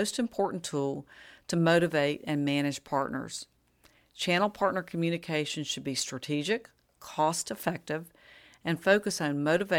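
No technical faults are audible anywhere in this speech.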